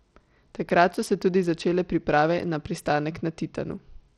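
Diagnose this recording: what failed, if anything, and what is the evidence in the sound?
The codec stage failed: plainly audible Bluetooth SBC compression damage runs throughout the speech, likely from a small bit pool, which fits a bitrate near 80 kbps. Starved upper sub-bands make the treble flicker, coarse quantisation adds grit and aliasing, and nothing remains above 18.4 kHz.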